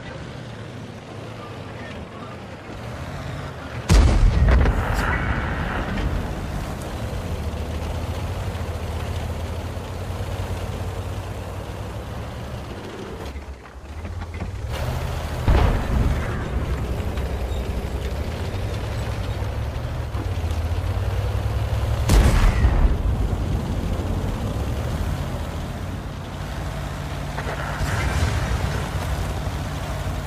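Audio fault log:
No fault is heard in this audio.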